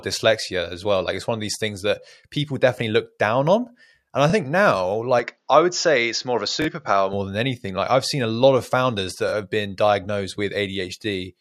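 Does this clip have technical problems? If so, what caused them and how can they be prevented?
Yes. Bluetooth stutter occurs three times in this speech: at 4.30 to 4.33 s just after "down on and i", at 6.62 to 6.69 s, and at 9.29 to 9.33 s between "a lot of founders" and "have been diagnosed". Each time, packets arrived late or not at all, so the receiver replayed its last buffered slice before picking up again further on. The first and third lose about 23 ms each, which fits a single dropped frame. The second loses about 46 ms, which suggests two. Keeping the Bluetooth link short and clear of interference, or recording over a wired connection, prevents this.

An input switched to a poorer device is heard from 5.20 to 7.13 s, ending just before "than anything like i've". The speech suddenly narrows, with nothing above 7.2 kHz, and turns duller, with no gap at the changeover and little change in loudness. 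A faint new noise floor, roughly 50 dB below the speech, comes in with it. The likely cause is the system moving to another microphone or a headset's call profile mid-recording. Locking the input device in the recording software before starting prevents this.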